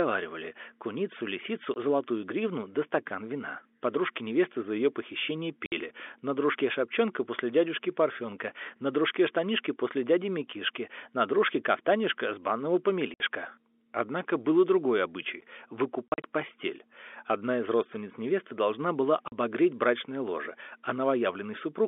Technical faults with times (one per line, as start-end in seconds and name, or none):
1.74-1.76 packet loss filled with silence
5.66-5.72 packet loss filled with silence
13.14-13.20 packet loss filled with silence
16.08-16.24 packet loss filled with silence
19.28-19.32 packet loss filled with silence